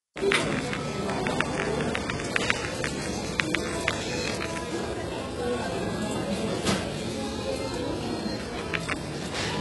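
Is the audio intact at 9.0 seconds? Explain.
No. At 9.0 s, as across the whole clip, the treble sounds gritty and metallic, likely from HE-AAC compression at a very low bitrate near 12 kbps. The upper bands are copies of lower ones, so harmonics misalign, and a spectrogram shows repeated texture and nothing above 11.5 kHz.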